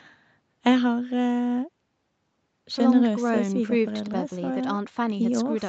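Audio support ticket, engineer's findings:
No faults found in this speech clip: the call microphone processing and the WebRTC call path both behave as expected, with the band topping out around 8 kHz as you'd get from an Opus call link at that bandwidth.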